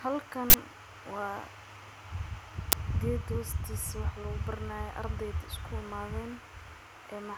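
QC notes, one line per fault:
0.50–0.54 s and 2.72 s, uninitialised buffer: a brief, loud burst of harsh digital noise and a loud crack as 40 ms and 10 ms blocks played out leftover memory before any audio was written.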